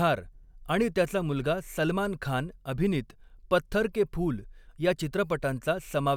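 Nothing in this speech recording stands out as a technical problem; there's no dropout, glitch or distortion anywhere to point to.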